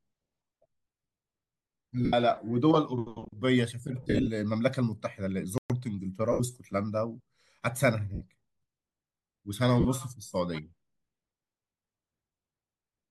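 At 2.05 s the speech breaks into a brief noisy smear lasting about 75 ms: lost LE Audio frames, where the LC3 decoder keeps replaying the last spectrum with randomised signs. The same smear returns from 4.02 to 4.28 s, scattered across about 255 ms in short bursts of up to roughly 50 ms, then at 6.32 s (75 ms), 8.15 s (60 ms) and 9.80 s (45 ms). The 75 ms gaps fit runs of ten 7.5 ms frames. Unlike a dropout, the gap is filled with hissy, pitchless sound rather than silence.

At 5.58 s the sound stops dead for 120 ms, a playback stall, likely because the player ran short of data or its thread was held up. What sets it apart from the lost frames is the clean, complete silence: no smear fills the gap and nothing fades away, and the speech simply resumes after the pause.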